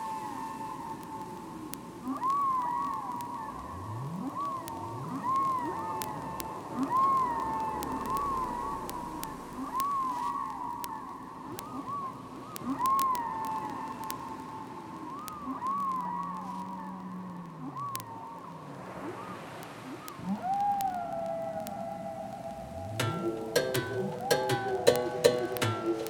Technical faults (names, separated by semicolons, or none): word clock ticks